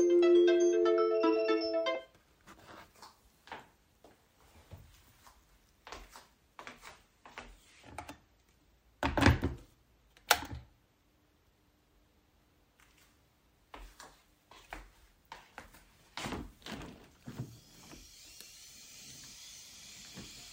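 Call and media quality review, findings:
Adaptive stream at a lower bitrate, 6.82 to 8.82 s. Quality changes abruptly, artefacts rise, no gap. Quality returns after 2 s. Probable component: adaptive streaming player. Mechanism: connection slowed, player swapped to a cheaper MP3 rendition. Sound points to a step from around 128 kbit/s down to roughly 45 kbit/s, then back.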